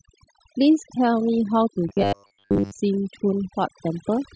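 Speech with overdone noise removal throughout: bands near the noise estimate are pulled to near silence, leaving twinkling specks in the background. From 1.89 to 2.73 s the voice becomes a rigid, metallic robotic sound with a 100 Hz buzz, most likely from repeated short buffers of about 10 ms replacing most of the real audio.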